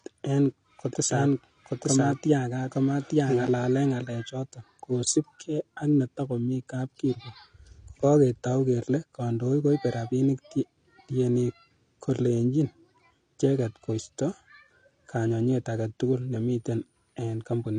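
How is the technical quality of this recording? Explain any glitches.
The recording has two audible problems: codec damage throughout and a short doubled passage near the start.

Throughout, the speech sounds dull and smeared, likely from AAC compression at a low bitrate, around 32 kbps. A spectrogram shows nothing above 9.8 kHz.

From 0.93 to 3.47 s there is a doubled audio track. A second copy at about the same level trails by about one second and starts and stops abruptly. It is likely a slower second capture path or an out-of-step edit. The waveform shows repeated shapes offset in time.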